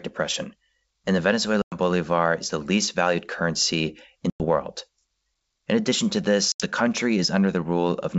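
Packet loss on an ADPCM call at 1.62–1.78, 4.30–4.45 and 6.52–6.64 s leaves hard-edged silent gaps. The decoder's predictor and step size then mistrack, so speech returns slightly distorted before settling.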